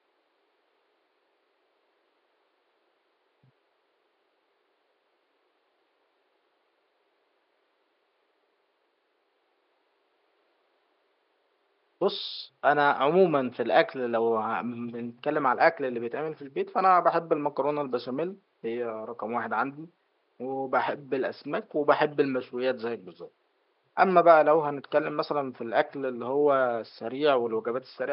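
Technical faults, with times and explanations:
No technical faults can be heard anywhere in the speech. A faint room noise sits underneath, about 46 dB below the speech, and belongs to the recording space rather than the system.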